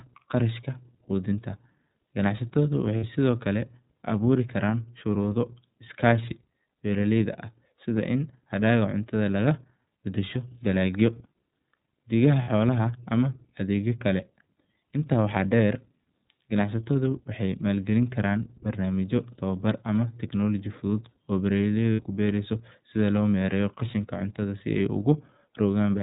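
The whole clip runs through the iLBC codec, band-limited below 4 kHz, with a plainly rough, slightly synthetic edge that fits its 30 ms frame mode. Lost iLBC frames come at 2.97, 12.42 and 21.93 s, each about 60 ms long, where the decoder holds a buzzy vowel-like tone before the speech snaps back.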